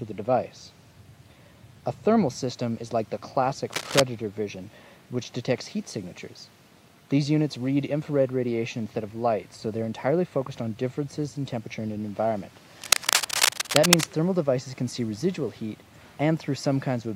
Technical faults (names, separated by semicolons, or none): cable scratch noise